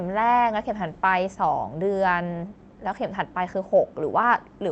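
No technical faults are audible.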